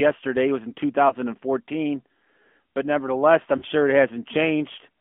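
From start to finish the speech is carried by the AMR narrowband mobile codec. Its buzzy, plainly synthetic texture suggests a mid-rate mode around 10.2 kbps. A spectrogram shows a hard ceiling near 3.4 kHz, an empty band below 200 Hz, and smeared, blocky harmonics.

Lost AMR speech frames interrupt the audio from 1.08 to 1.14 s and again from 3.58 to 3.65 s. The decoder repeats its last good settings at falling gain, producing a brief dip or warble. The waveform shows a shrinking envelope there, which fits one lost 20 ms frame first, then two.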